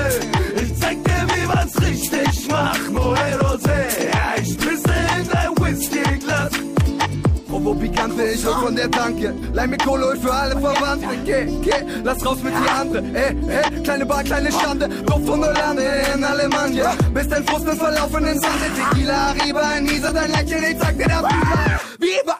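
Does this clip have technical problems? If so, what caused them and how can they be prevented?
Yes: damaged data in a compressed stream causes brief glitches at 2.93–2.99 s, 9.38–9.44 s and 20.07–20.12 s, where the decoder misreads corrupted frames and resynchronises. Checksummed storage and reliable transport prevent this.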